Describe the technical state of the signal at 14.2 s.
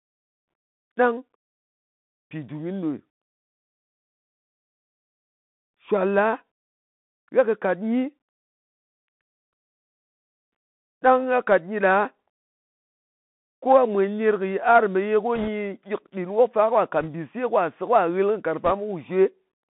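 At 14.2 s you're hearing the Bluetooth CVSD headset codec, which runs through the whole clip. The one-bit delta coding squeezes the speech into roughly 150 Hz to 3.7 kHz, leaving scratchy s sounds and a grainy hiss.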